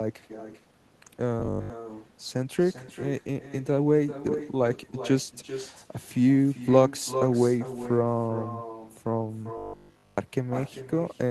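Echo with no canceller runs through the whole speech clip. The far end's loudspeaker output is reaching its microphone, and nothing subtracts it, so every phrase returns after a round trip of roughly 0.4 s. The copy sits about 13 dB below the direct speech and sounds thinner. Each syllable trails a faint, delayed ghost.

Robotic sound from repeated short buffers appears from 1.40 to 1.70 s and again from 9.58 to 10.18 s. The likely cause is audio arriving too late, so the receiver keeps replaying the last short slice instead of playing fresh sound. The replay locks onto a 50 Hz buzz, which fits a repeated 20 ms buffer. In the first stretch most of the sound is replaced and only fragments of the real signal get through. In the longer second stretch the repetition takes over completely, leaving a rigid metallic drone that roughly follows the speech's loudness.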